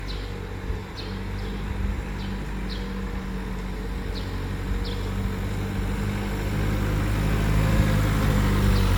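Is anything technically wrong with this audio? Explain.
Yes. Throughout the clip, this is low-bitrate audio saved at a high bitrate. The file is a 256 kbit/s MP3, but it most likely passed through AAC-LC at around 48 kbit/s first. Re-encoding at the higher rate cannot restore what that first pass threw away. Its coding artefacts remain. On a spectrogram, energy stops sharply with nothing above 19 kHz, and the upper bands look patchy and blocky. The waveform shows no obvious sign.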